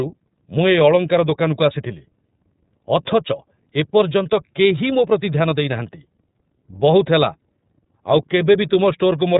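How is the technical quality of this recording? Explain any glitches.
The technical quality is limited by one fault that lasts the whole recording: the speech has passed through the iLBC codec. This narrowband VoIP codec encodes each frame's excitation on its own, without reference to the previous frame. It runs here with a 30 ms frame length and a rate near 13.33 kbps. Nothing above about 3.8 kHz survives, so the speech sounds muffled and telephone-like. The coding damage is plainly audible as a rough, slightly synthetic edge on the speech.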